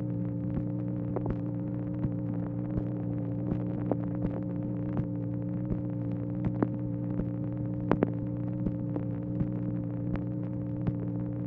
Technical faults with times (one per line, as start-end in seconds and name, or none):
none